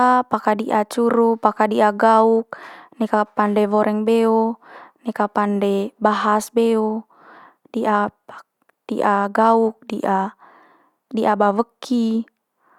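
Nothing goes wrong anywhere in this bit of speech, so there's no fault to point to at any moment.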